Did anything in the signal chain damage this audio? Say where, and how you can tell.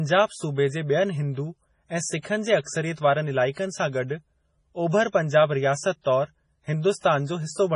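Yes, at the codec: the speech has nothing above 10.5 kHz and sounds watery throughout, likely heavy MP3 compression, which fits a bitrate of about 24 kbps.

There's pre-echo too: a brief hiss runs ahead of attacks from 3.51 to 3.57 s and from 6.02 to 6.06 s, where block-wide quantisation noise spills before the onset.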